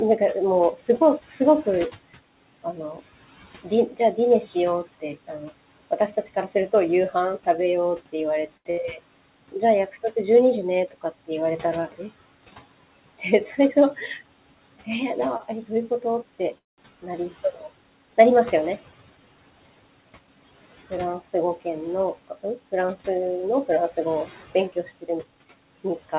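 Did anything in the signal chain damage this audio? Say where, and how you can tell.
Yes. The call processing stage shows noise suppressor artifacts throughout. The room noise, about 19 dB below speech, is pulled down by about 17 dB between words and swells back under them. Everything above 4 kHz is missing, which fits the G.711 A-law codec at 64 kbps.

The same suppressor causes speech cut by the noise suppressor. From 0.19 to 12.0 s, about a second of soft consonants and word endings drop by up to about 16 dB. It happens again from 13.19 to 17.63 s, by up to about 13 dB. Further losses of up to about 18 dB fall between 20.90 and 22.73 s, and up to about 14 dB between 23.67 and 25.09 s. Speech was judged to be noise.

Network jitter causes a short stall from a late packet three times. A sound is held for 82 ms at 8.57 s and for 58 ms at 8.71 s. Another is held for 26 ms at 15.37 s. Each time the jitter buffer ran dry. 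The receiver stretched the last sound until the packet arrived, so nothing is lost.

There is a call audio freeze from 16.58 to 16.81 s. The last sound is extended for about 0.2 s, and 180 ms of that is silence. Then the audio resumes where it stopped. The likely cause is packets delayed in transit, which emptied the jitter buffer.

A jitter buffer speed-up follows, from 18.61 to 19.51 s and from 19.95 to 20.58 s. The speech runs about 11% fast at unchanged pitch and sounds hurried. The receiver cut pitch-period slices to drain excess buffered audio. It removed around a tenth of a second in the first stretch and somewhat less in the second.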